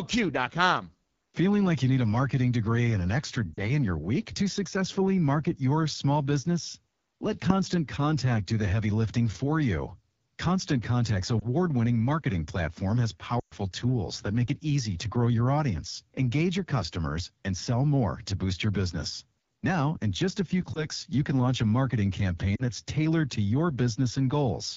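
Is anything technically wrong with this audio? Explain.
Yes. The speech has two problems.

Throughout, the AMR wideband (HD Voice) codec is plainly audible. The rough, raspy texture points to one of the lowest AMR-WB modes, around 8.85 kbit/s. The model-based coding below 6.4 kHz is too coarse, and the top band up to 7 kHz is only shaped noise.

Lost AMR speech frames occur at 3.54–3.62, 11.40–11.47, 13.40–13.55, 20.74–20.86 and 22.55–22.63 s. The decoder bridges each gap by repeating the last pitch and vocal-tract settings at falling gain. The short ones sound like brief dips or warbles. The longest, at 13.40 s, which fits a run of several 20 ms frames, drops to near silence within two frames before the speech recovers roughly.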